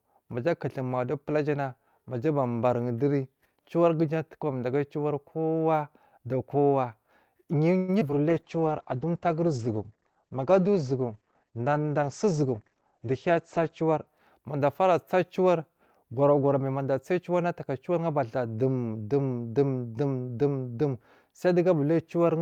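At 7.77 s the speech stops for about 0.13 s and is replaced by a fading continuation of the last sound. This is a call audio freeze, likely from packets held up in transit that drained the jitter buffer. Speech then resumes where it left off with nothing lost.

Two short concealed packet losses follow at 8.00–8.03 s and 8.09–8.11 s. The receiver bridged the holes by extending the preceding sound, leaving brief smears.

A call bitrate drop runs from 8.30 s to 14.13 s. The encoder falls from 48 to 12 kbps and the bandwidth narrows from 20 kHz to 8 kHz, so the speech sounds muffled and rough.

Within that span, at 8.56–9.06 s, a jitter buffer slow-down plays the audio at 90% speed at unchanged pitch. Repeated pitch periods add 60 ms while the buffer rebuilds its reserve.

From 12.02 s to 13.97 s, a jitter buffer speed-up runs at 106%. The receiver trims roughly 150 ms of short pieces to cut excess delay, so the speech sounds hurried.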